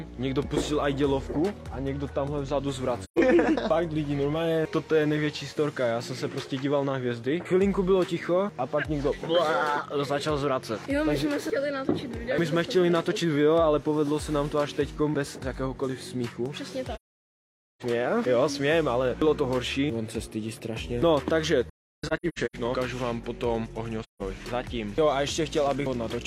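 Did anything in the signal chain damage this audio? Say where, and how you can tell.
Yes, at the codec stage: AAC frame loss with muting. Soft-edged holes sit at 3.04–3.18 s, 16.95–17.82 s and 24.03–24.22 s, with a choppy stretch at 21.69–22.56 s whose gaps run up to around 0.3 s. Missing frames decode as silence, and overlapping windows fade the sound out and back in.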